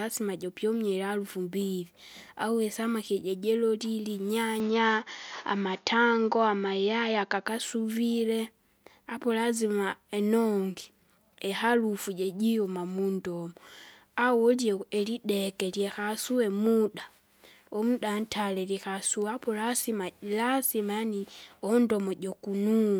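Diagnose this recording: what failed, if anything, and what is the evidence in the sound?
From 4.6 s to 7.48 s the speech turns duller and a few dB different in level, with nothing above 6.9 kHz and a faint new noise floor, then recovers. That points to the input likely switched to a poorer device at driver level, a narrower-band microphone swapped in without any gap.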